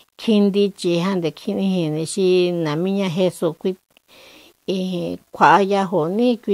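A speech recording with grainy, signal-following distortion across its whole length, the signature of low bit depth without dither. The error tracks the speech rather than sitting as a steady hiss. It roughens quiet passages, and the softest decays break up into sputtering or fall abruptly to silence. The error sits roughly 40 dB below the speech. The likely cause is requantisation to about 9 bits by plain rounding, with no dither to decorrelate the error.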